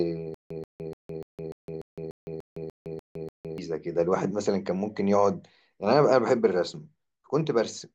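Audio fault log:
0.34–3.58 s, stutter with silent gaps: one 134 ms speech fragment replays 11 times, each followed by 160 ms of digital silence, an even 294 ms cycle, likely a stalled stream retrying. The waveform shows identical blocks separated by flat silent stretches.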